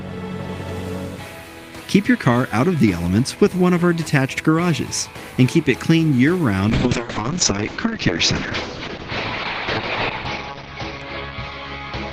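Around 6.7 s there's a call bitrate drop that runs right to the end. The bandwidth estimate fell and the encoder went from about 32 kbps down to 7 kbps, sitting at the bottom for roughly 3.4 s. At that rate it codes much more coarsely and trims the top end, so the audio bandwidth shrinks from 20 kHz to about 6 kHz. You hear it go muffled and a bit rough and watery, and it doesn't recover before the clip ends.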